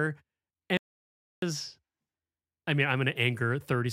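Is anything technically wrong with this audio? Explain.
Yes. An audio dropout to silence runs from 0.77 s to 1.42 s. The input feeding the recorder was likely interrupted, perhaps by a disconnected device, a failed link or an accidental mute, while recording carried on writing zeros. The speech stops abruptly in mid-flow and resumes just as suddenly. The gap between is dead silence with no room tone, and about 0.65 s of speech is lost outright.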